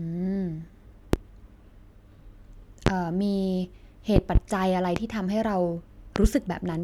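Sharp, loud pops cut across the speech at 1.13–1.17 s, 2.87–2.90 s, 4.96–5.00 s, and as quick doubled pops at 4.16–4.39 s and 6.16–6.28 s, peaking roughly 20 to 25 dB above the speech, which carries on underneath. These loud pops likely come from brief voltage spikes, such as a connector, switch or static discharge, added to the signal and shaped into short thumps by the downstream circuitry.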